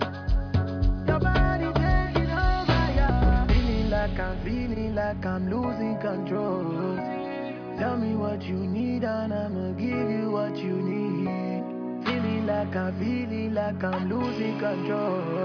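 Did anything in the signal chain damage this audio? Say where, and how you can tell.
No, none of the stages from capture through playback left any audible damage on this audio.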